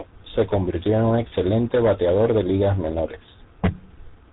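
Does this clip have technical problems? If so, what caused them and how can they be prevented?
Yes. Throughout, the speech sounds rough, muffled and warbly, with nothing above 3.8 kHz. This is tandem speech coding: G.726, then GSM full rate, the second re-encoding the first's degraded output. Keeping one codec end to end, with transcoder-free operation between networks, prevents this.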